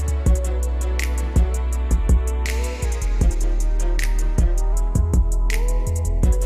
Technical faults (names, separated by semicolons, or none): drift correction step